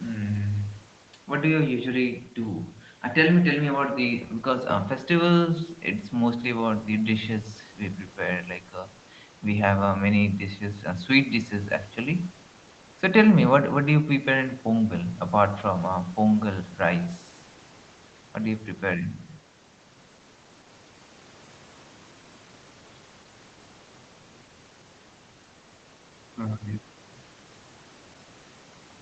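No technical faults are audible.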